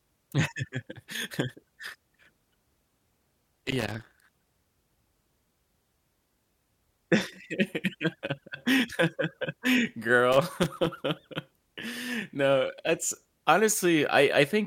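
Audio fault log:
3.39–4.35 s and 10.32–11.02 s: loose connector crackle, irregular bursts of scratching as a worn contact intermittently breaks the speech signal path.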